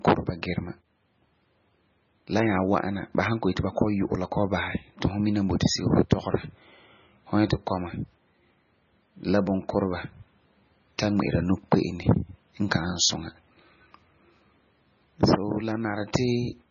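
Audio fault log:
Throughout: MP3 compression, likely cause; treble cut at 6.9 kHz, with heavy watery swirl as weak frequency lines drop in and out, fitting a bitrate near 17 kbps.
16.13 s: pre-echo; brief hiss about 10 ms ahead of a sharp attack, as quantisation noise spreads across the block and softens the onset.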